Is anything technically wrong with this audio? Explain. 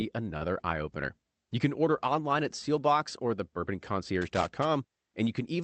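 Yes, there are three kinds of fault in this speech, heard over a call path band-limited to 8 kHz.

From 0.37 to 0.44 s there is a short stall from a late packet. The jitter buffer ran dry and the receiver held the last sound for about 40 ms, giving a drawn-out syllable with a slight buzz or dip and nothing lost.

At 0.41 to 0.47 s and again at 0.65 to 0.71 s, a lost packet was rebuilt from error correction. A low-bitrate copy carried in the next packet filled each 60 ms gap, so there is no dropout, only briefly rougher, noisier sound.

From 4.21 to 4.65 s there is loose connector crackle. A poor contact made and broke rapidly, chopping the signal into an irregular burst of scratchy crackle.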